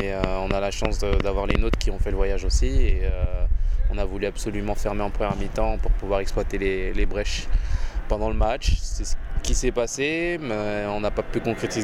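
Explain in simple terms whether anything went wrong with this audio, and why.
From 0.00 to 1.75 s, a train of clicks: about ten same-shaped ticks at an uneven pace, likely interference from nearby equipment, unlike random crackle.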